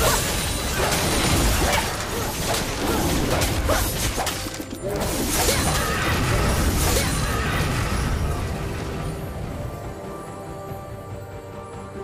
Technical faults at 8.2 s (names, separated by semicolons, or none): doubled audio track